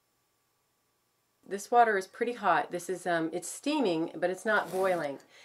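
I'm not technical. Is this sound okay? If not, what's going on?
Yes, it's fine: nothing in this sound stands out as a problem, so there's nothing going wrong to worry about.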